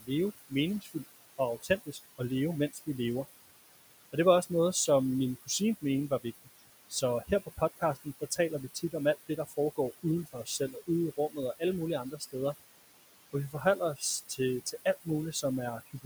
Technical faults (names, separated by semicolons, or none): overdone noise removal; noise suppressor artifacts; speech cut by the noise suppressor